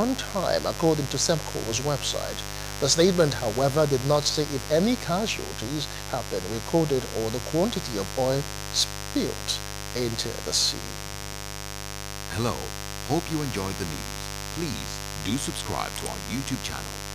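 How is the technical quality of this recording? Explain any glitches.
The recording is marred by a strong mains buzz that runs through the whole clip, sitting only roughly 10 dB below the wanted sound. It comes from 50 Hz power: something like a dimmer, rectifier or unshielded cable injects sharp switching spikes twice per cycle, so the interference carries a dense stack of harmonics reaching into the several-kHz range. That spread of harmonics gives it a raspy, edgy texture, which is what separates it from plain hum, a smooth, low tone at 50 Hz with little above it.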